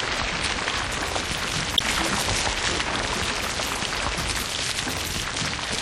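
A recording of everyday sound with plainly audible MP3 compression throughout, likely from a low-bitrate encode, with a texture that fits roughly 64 kbps. It sounds watery and swirly. On a spectrogram the treble stops at a flat ceiling, and weak components below it flicker on and off in patches from frame to frame. From 1.74 to 1.82 s, damaged data in the compressed stream produces a short glitch as the decoder misreads frames and loses sync. On a spectrogram this appears as a narrow vertical band where the spectrum is disrupted.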